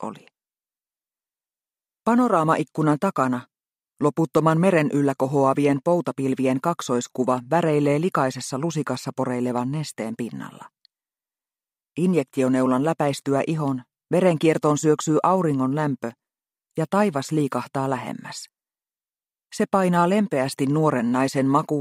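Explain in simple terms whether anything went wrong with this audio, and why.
Nothing went wrong here.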